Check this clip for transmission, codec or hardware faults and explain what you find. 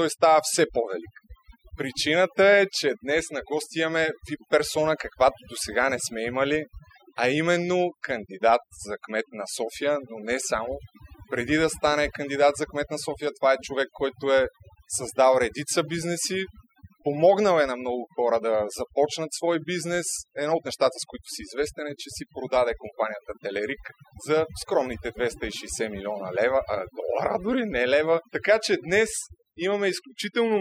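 The fault here is overdone noise removal, present through the whole speech clip rather than in any one section. A noise reduction stage was set far too aggressively. Any frequency band close to its noise estimate gets pulled right down or switched off, and quieter parts of the voice get caught along with the noise. The gaps between phrases drop away, broken by twinkling specks. What separates it from low-bitrate codec artefacts, which also sound swirly, is that dead, speckled background.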